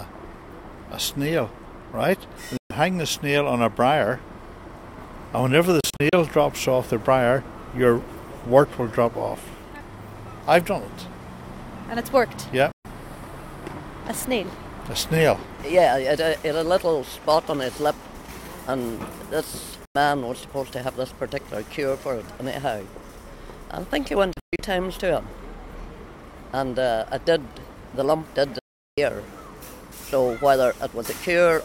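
Digital broadcast dropouts mute the audio six times, at 2.57, 5.80, 12.72, 19.85, 24.33 and 28.59 s, cutting out within 3 ms. Gaps last 0.1 to 0.4 s. At 5.80 and 24.33 s they break into short holes, consistent with corrupted 32 ms frames being muted.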